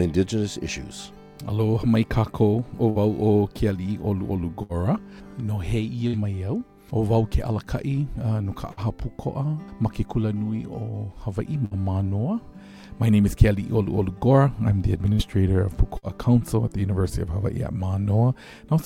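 Seven times the audio briefly smears into a held, fading continuation of the sound just before and then jumps ahead, at 2.89, 4.63, 6.07, 8.71, 11.65, 15.13 and 15.97 s. Each is a burst of packet loss. About 60 ms of audio never arrived in time, so the receiver stretched the last sound for roughly 56 to 62 ms while turning it down, then resumed with that 60 ms stretch missing.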